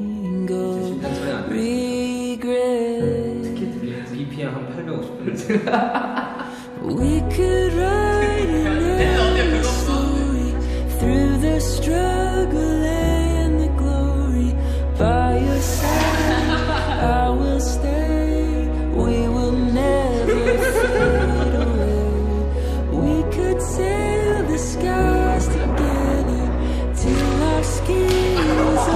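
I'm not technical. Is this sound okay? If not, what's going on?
Yes, this sound is fine.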